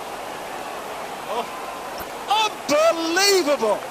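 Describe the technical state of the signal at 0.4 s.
At 0.4 s the sound carries plainly audible MP2 compression damage, present from start to finish rather than as a local event. It is dull and gurgling, with a granular, coarsely quantised texture, and upper bands seem to flicker in and out. The likely cause is an MPEG Layer II encoder starving its 32 sub-bands of bits, consistent with a rate near 80 kbps. A plain low-pass filter would sound dull but steady and clean, without this fluttering grit.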